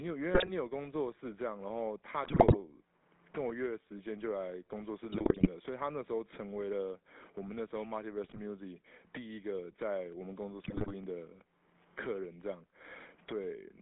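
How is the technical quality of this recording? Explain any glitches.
Technical quality is poor: the speech has passed through a GSM full-rate codec throughout, with repeated bit-error bursts and two isolated clicks.

GSM full-rate codec: The whole clip sounds buzzy and gravelly, as expected from a 13 kbps GSM full-rate coder. It models the vocal tract and excites it with sparse, regularly spaced pulses. The band is limited to roughly 250 Hz to 3.6 kHz, giving a thin, boxy character.

GSM bit errors: Bursts occur at 0.34–0.51 s, 2.24–2.57 s, 5.12–5.49 s, 8.24–8.39 s and 10.64–10.91 s. Corrupted bits reached the decoder, scrambling filter, pitch and gain parameters frame by frame. The speech breaks into squawks, pops and gargling during each burst.

Dropped samples: Sharp single clicks at 10.12 s and 11.04 s are likely caused by a fraction of a millisecond of samples missing from the stream. 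The waveform jumps abruptly from one value to a later one. Nothing audible is lost, but each jump produces a brief tick.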